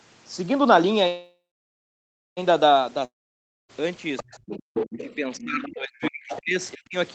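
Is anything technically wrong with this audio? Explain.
Yes, there are five kinds of fault.

Call audio freeze, 1.07 to 2.39 s: the sound stalls and the held last sound fades into nearly 1 s of silence before resuming exactly where it stopped. The likely cause is late packets draining the jitter buffer. Unlike a dropout, nothing is lost; the speech is only pushed later.

Long network dropout, 3.05 to 3.71 s: again a fading tail and then about 0.58 s of silence, but when the audio returns it has jumped ahead, with about 0.64 s of speech gone. This is likely packets that never arrived. The missing stretch is what separates it from the freeze.

Other side's voice leaking through, 4.16 to 5.67 s and 6.02 to 6.40 s: a second voice sits under the talker, about 10 dB down in the first stretch and about 15 dB down in the second. It is likely loudspeaker output that the echo canceller failed to remove. 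It adds sound, whereas suppression takes it away.

Speech suppressed in double talk, 4.22 to 4.38 s and 5.04 to 6.95 s: the talker's voice dips, by roughly 30 dB in the brief first instance and up to about 40 dB across some 1.5 s in the second. The likely cause is the canceller ducking everything while both sides speak.

Background gated by the echo canceller, 4.66 to 4.74 s: the room sound drops by about 40 dB for a moment and then returns once the canceller releases. Unlike double-talk suppression, this brief hole affects the background rather than the talker's voice.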